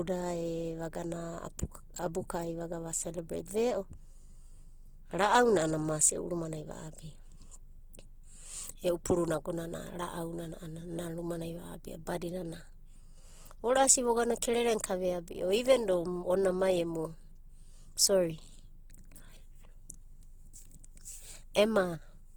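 Throughout the speech there is grainy, rough texture with a noisy fill, most likely from Opus compression in its music (CELT) mode at a bitrate around 16 kbps. Band energies are kept but detail is replaced by folded or noise-like content. A spectrogram shows full bandwidth up to about 20.2 kHz, with smeared, speckled upper bands.

At 7.93 s there is pre-echo: a brief hiss about 13 ms long just before a sharp attack. The coding noise for the loud onset spreads across its transform block into the quiet moment before it. On a waveform, low-level fuzz appears just before the transient, and a spectrogram shows a thin broadband smear ahead of it.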